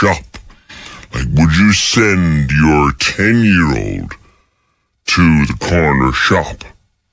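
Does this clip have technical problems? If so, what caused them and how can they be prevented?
Yes. Throughout, the speech has a wrong sample rate: samples play slower than they were recorded, without conversion, so everything runs at 0.726 speed and 5.55 semitones low, which fits 22 kHz material played at 16 kHz. Prevent it by resampling to the playback rate or setting playback to match the recording rate.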